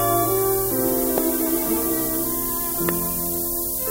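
A steady, thin hiss runs through the whole clip, rising sharply toward the top of the band and sitting about 5 dB above the sound itself. This is low bit depth with noise shaping: only 4 bits are used, and the rounding error is pushed upward in frequency.

From 1.18 to 1.20 s, and again from 2.89 to 2.91 s, a single sharp loud pop jumps far above the sound, which continues underneath. Each is likely a brief voltage spike from a switch, plug, static or driver glitch.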